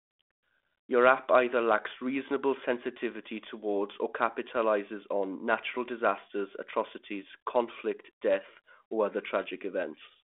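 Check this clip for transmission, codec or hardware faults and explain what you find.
No transmission, codec or hardware faults.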